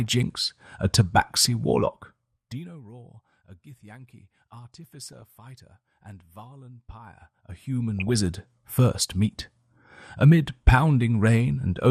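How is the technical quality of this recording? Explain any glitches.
The recording has a dull, compressed sound throughout and three short bursts of corruption.

Throughout, the upper frequencies sound switched off and a gurgling, granular grit sits on everything, likely from MP2 compression at a low rate around 80 kbps. Too few bits leave upper sub-bands dropped and the remaining bands coarsely quantised. The damage is constant, not momentary.

DAB burbling hits at 1.28 s, from 5.13 to 5.22 s, and from 7.99 to 8.10 s. These are short blips of noise in single sub-bands. The pattern points to reception bit errors, light at first and heavier later, slipping past error correction into the audio frames. Unlike the steady codec dullness, they are sudden isolated events. The fader-style level changes in the clip sound smooth and are unaffected.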